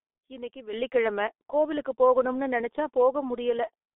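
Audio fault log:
Throughout, G.723.1 codec: the speech is squeezed into a telephone band of roughly 300 Hz to 3.6 kHz, with nothing above 3.8 kHz, and the damage is heavy. At around 6.3 kbit/s in 30 ms frames, the coarse, slow-moving voice model leaves it muffled and hoarse, with consonants smeared.
0.73 s to the end, sudden gain jump: at 0.73 s the level steps up by about 11 dB with no ramp. The speech and the background noise rise together and stay up. That points to a gain setting or bit shift likely applied in a single sample.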